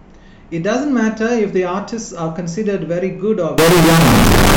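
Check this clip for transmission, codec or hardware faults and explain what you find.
One fault is present, in the final second of the speech.

From 3.58 s to 4.57 s there is a float read as integer fault. The sound jumps to a harsh, nearly square wave at an almost fixed, high level, with background noise as loud as the speech. The likely cause is 32-bit float samples being read as 32-bit integers, so sign and exponent bits set the level. Unlike ordinary clipping, quiet passages become just as loud, though the pitch still carries through.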